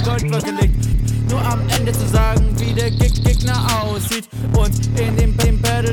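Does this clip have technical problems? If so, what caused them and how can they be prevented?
Yes. A Bluetooth stutter at 1.73 to 1.76 s: the wireless link stopped delivering audio for about 29 ms, which fits a couple of lost packets. The receiver replayed its last buffered slice to fill the gap, so the sound briefly repeats and then jumps ahead as if it had kept playing. Keeping the devices close, reducing 2.4 GHz interference and using a larger receive buffer would prevent it.

Overlapping chunks at 3.18 to 3.43 s: the audio was handled in 2.0-second blocks, and one block began 250 ms before the previous one finished. That quarter-second of sound plays twice at the join, so it is heard as a short repeated stretch. Aligning chunk boundaries precisely, or crossfading and trimming the overlap before joining, would prevent it.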